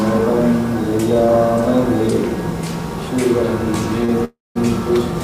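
A short stall from a late packet at 4.05 to 4.11 s holds the sound for 34 ms, visible as a smeared, horizontally stretched spectrogram slice with nothing lost. A call audio freeze at 4.25 to 4.57 s fills 309 ms, the buzz or hiss fading into 190 ms of flat waveform silence, likely from packets held up in transit emptying the jitter buffer.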